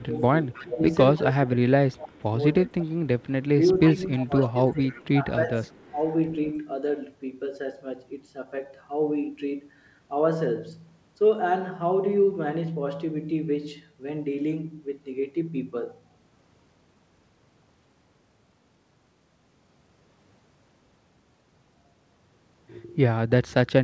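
From 0.0 to 1.21 s a faint copy of the speech trails it by 313 ms. This is echo leak. The likely cause is a far-end loudspeaker whose echo canceller let part of the returned signal through. It recurs briefly at 1.92 to 1.97 s, then at 2.79 to 3.46 s. From 4.17 to 5.02 s it is clearly louder, and a faint scrap returns at 5.73 to 5.9 s.

Over the same span the main speech also falters. Between 0.02 and 3.03 s, and again between 3.94 and 6.0 s, it dips sharply, by up to about 20 dB, and thins or breaks up. This is speech suppressed in double talk. With both sides active, the canceller likely turned down the talker along with the echo.

Throughout, nothing sounds above 8 kHz. That fits a wideband call codec such as G.722 at 64 kbps.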